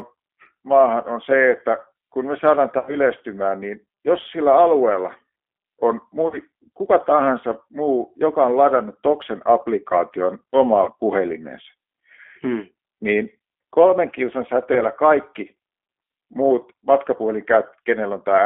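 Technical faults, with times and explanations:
Throughout, G.729 codec: the speech passes through an 8 kbit/s G.729A coder on a line band of about 250 Hz to 3.4 kHz. The coder rebuilds each stretch from a vocal tract filter, a pitch predictor and a few pulses, so voices come out plainly rough and slightly synthetic. On a spectrogram, energy stops in a flat ceiling near 3.4 kHz and thins below 250 Hz. Harmonics look smeared, with pulse-like grain between formants.
2.79–2.96 s, 6.28–6.38 s, 10.84–10.90 s and 14.73–14.82 s, VoIP packet loss concealed by the speech codec: audio goes missing for about 80, 40, 30 and 20 ms, the first right after "että kun me saadaan" and the last after "hmm niin kolmen kilsan". Each time, the decoder extends the last pitch and filter into a buzzy tone or coloured noise that fades, and speech stays weak briefly afterward. A spectrogram shows frozen, repeating harmonic bands, and the waveform shows a decaying envelope.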